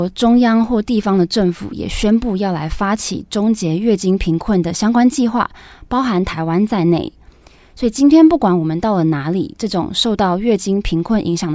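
No technical faults can be heard in this recording.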